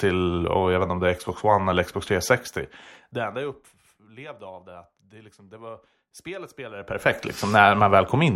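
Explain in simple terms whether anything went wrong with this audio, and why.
Zipper noise, from 6.74 to 7.16 s: the volume changes in many tiny jumps, about fifty a second, instead of gliding, and each jump ticks audibly.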